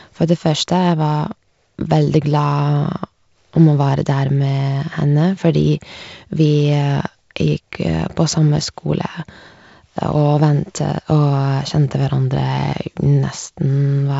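Nothing here counts as a fault; the speech simply comes across as wideband telephone audio over G.722 at 48 kbit/s, with the top of the sound stopping around 7.7 kHz.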